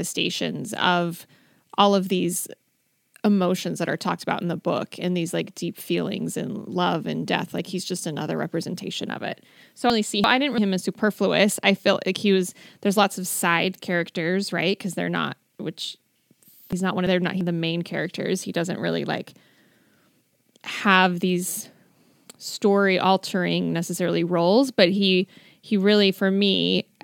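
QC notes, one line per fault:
9.90–10.58 s, chunks out of order: a 0.34 s chunk plays one chunk late, swapping two blocks, so the sound jumbles briefly across three hard joins.
16.73–17.41 s, chunks out of order: another 0.34 s chunk arrives one position late, so the sequence is scrambled momentarily across three hard joins.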